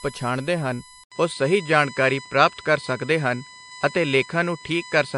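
USB whine runs through the whole recording as a steady 1 kHz tone, about 20 dB below the speech, from the bus's 1 ms frame current leaking in through power or ground.

Low-bitrate audio saved at a high bitrate is also present throughout: the speech carries the smeared, watery traces of heavy MP3 coding despite content reaching 20.9 kHz, which points to a 48 kbit/s original likely re-encoded at 256 kbit/s.

Input switched to a poorer device at 1.04 s: after an 80 ms silence, the speech goes duller with nothing above 9.6 kHz and a faint new noise floor at unchanged level, likely a narrower-band microphone taking over.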